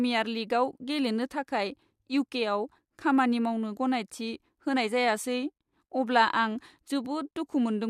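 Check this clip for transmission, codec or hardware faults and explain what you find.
One transmission fault recurs three times: overlap between stream segments. It occurs at 1.79, 2.78 and 3.77 s, about once per second, which fits 1-second segments. Overlapping time stamps made the player trim 5 to 10 ms of speech at each joint, producing a tiny click or skip. The waveform shows a sudden step discontinuity, and the spectrogram shows a thin vertical broadband line.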